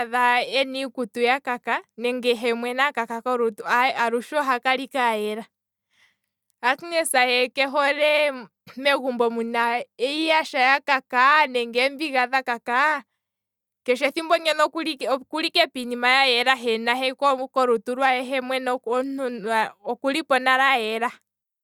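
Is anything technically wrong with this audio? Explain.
No, nothing in this speech recording stood out as a technical problem on listening.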